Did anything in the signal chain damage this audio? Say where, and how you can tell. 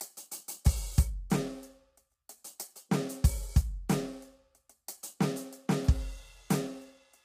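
Yes: plainly audible low-delay AAC compression throughout, likely at the codec stage. The music sounds grainy, with noise between harmonics and a thinned top band; this fits AAC-ELD near 32 kbps, with its short low-delay frames.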